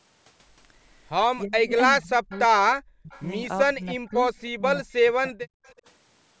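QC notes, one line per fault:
1.44–2.32 s, 2.72–3.12 s, 3.76–4.14 s, 4.55–5.49 s: speech suppressed in double talk. The speech dips by about 10 to 40 dB in patches, likely because the echo canceller mistook it for far-end echo while both sides talked. It shows as waveform envelope holes and vertical spectrogram gaps.
2.31–2.39 s, 3.11–3.25 s, 5.64–5.74 s: echo leak. Short, faint copies of the speech return 314 ms late, about 25 to 35 dB below it, likely loudspeaker pickup the canceller missed. On the spectrogram, weak repeats of the preceding harmonic pattern appear, displaced in time.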